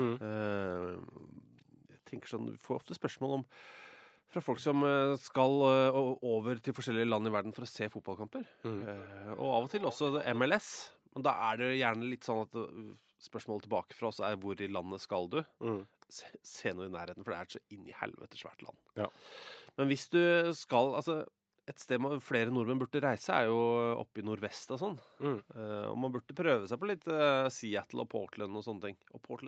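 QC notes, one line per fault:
8.75–10.45 s, feedback echo between two devices: speech repeats about every third of a second, peaking about 14 dB below the speech, as a nearby device replays it into the microphone.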